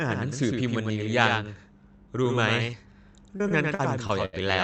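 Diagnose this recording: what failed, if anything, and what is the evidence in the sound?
A doubled audio track runs throughout: a dry, full-band copy about 5 dB quieter trails by roughly a tenth of a second, likely from a second capture or editing path. Unlike room echo, it has no decay.

Short concealed packet loss at 2.71 to 2.74 s, a network fault: about 20 ms never arrived and was patched by extending the previous sound, leaving a brief smear rather than a hard click.

Repeated packet loss (robotic sound) from 3.36 to 4.35 s, also network: five gaps, longest 75 ms, about a fifth of the span concealed. Unlike the single smear, the patches give a choppy sound with pieces missing.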